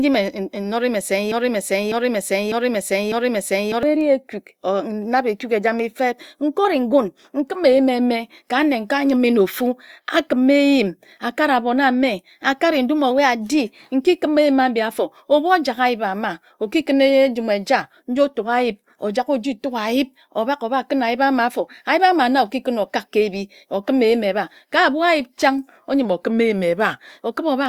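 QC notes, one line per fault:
1.32–3.83 s, broken-record loop: a 0.6 s fragment of the speech repeats exactly four times back to back, and the speech that belonged in that gap is lost. This is likely a player or stream stalling and resending the last fragment it held.
6.65–7.42 s, 13.11–13.88 s, 26.05–26.99 s, drift correction step: in the first two, just after "ekuk ejame feb" and "abon ame akare ndum", the speech runs 6% fast and about a semitone high (101 cents). At 26.05 s it runs 6% slow and about 108 cents low. This is likely from clock-matching software changing the playback rate in one step to rebalance its buffer.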